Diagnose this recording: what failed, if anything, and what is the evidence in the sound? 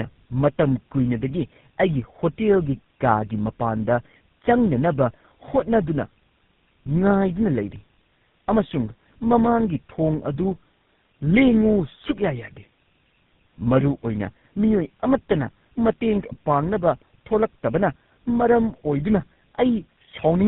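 Tandem speech coding at the codec stage affects the whole recording. Nothing reaches above 3.8 kHz, and the rough, muffled, warbly texture fits GSM full rate coding applied three times in a row, bridged by G.711. Each pass re-encodes the previous pass's errors, so the damage goes beyond what a single narrowband codec would cause.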